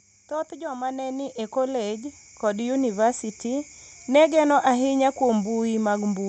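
From 0.28 to 3.07 s, automatic gain rising lifts the level by about 12 dB. Speech and background noise swell together, unlike a talker moving closer, beneath the call path's 8 kHz bandwidth limit.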